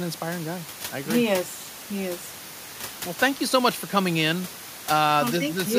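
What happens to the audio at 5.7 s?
Nothing goes wrong at 5.7 s: the speech carries on intact, with only the room's own background noise sitting about 16 dB below it.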